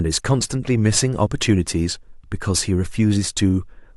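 No audible faults turn up anywhere in this speech recording.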